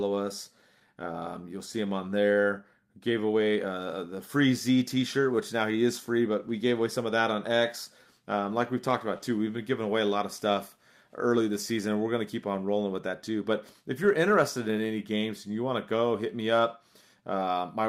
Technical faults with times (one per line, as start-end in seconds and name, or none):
0.00-17.89 clock drift between sender and receiver
0.15-17.83 repeated timing corrections